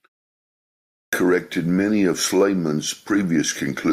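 At 0.98 s, following 0.98 s of silence, the speech starts with a clipped start after a pause. The output device, idle during the gap, needs time to wake and relock, so about 146 ms up to 1.13 s is swallowed and the speech begins abruptly without its first sounds.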